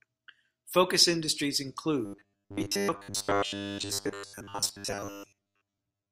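From about 2.06 s to the end, the speech goes robotic: a stiff, metallic buzz at 100 Hz that still loosely tracks the words. That's likely repeated short buffers, with the last 10 ms or so looped most of the time while fresh audio gets skipped.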